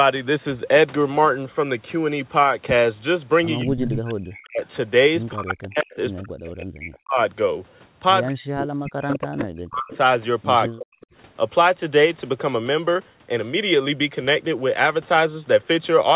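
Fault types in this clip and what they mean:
Echo leak: A delayed copy of the speech comes back into the call, about 205 ms behind the original. This likely means a loudspeaker on one side feeds a microphone, and its echo canceller fails to remove it all. The echo is heard from 3.61 to 4.67 s and from 8.23 to 11.07 s, about 10 dB below the speech. A fainter scrap, about 25 dB down, appears from 5.62 to 5.96 s.
Speech suppressed in double talk: The speech dips and breaks up while the other side talks at the same time. The echo canceller likely cannot tell its own talker from the returning echo, so it turns both down. This happens from 3.64 to 7.19 s and from 8.28 to 11.01 s. The deepest drops reach roughly 40 dB. In total, around two seconds are affected in the first stretch and one and a half in the second.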